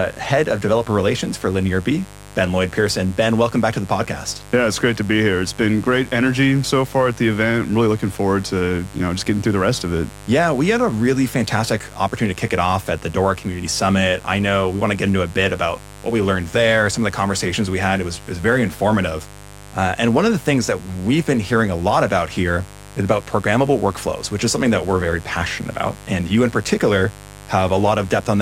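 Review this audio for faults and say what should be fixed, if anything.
Sharp switching spikes from a nearby dimmer, rectifier or an unshielded cable are getting into the signal path at twice the 50 Hz mains rate, so mains buzz runs through the whole clip. Because the spikes are so abrupt, they carry a dense ladder of harmonics of 50 Hz reaching up into the kilohertz range. The result is a steady, raspy buzz sitting roughly 20 dB below the speech. Moving the recording chain away from dimmers and power supplies, and using properly shielded, grounded cabling, should prevent it.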